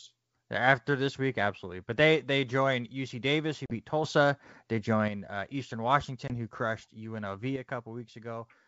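At 3.66 s the speech drops into a hard-edged hole of about 40 ms, roughly a couple of packets, and runs to 3.75 s. That's packet loss on an ADPCM call. The gap is filled with silence, and the receiving decoder's predictor and step size lose track of the sender's. When sound comes back it is slightly distorted, with a bit of grit, and settles over the next few tens of milliseconds. It happens again at 6.28 s with a shorter hole of about 20 ms, around one packet, running to 6.34 s. The same slight distortion follows right as "who crushed" comes in.

Between those, at 4.04 s, there's a sudden gain jump. The speech and the background noise leap up together by about 6 dB with no ramp at all, stay there until 5.08 s, and then drop straight back. At 7.56 s the opposite happens: everything falls by about 7 dB in one step and stays down to the end. Both look like a setting or bit shift likely applied instantly rather than faded in.

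The wideband G.722 coding underneath keeps the speech clear, with only the faint upper-band hiss you'd expect from it.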